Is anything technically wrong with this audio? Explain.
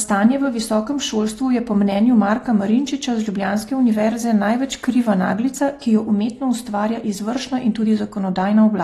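Yes. AAC compression damage runs through the whole speech clip, likely from AAC-LC coding at a low bitrate, around 32 kbps by the sound of it. Starved of bits, the encoder quantises the spectrum coarsely and discards the top, leaving nothing above 12.4 kHz. The speech sounds dull and smeared, with a warbling, fizzy edge on sibilants.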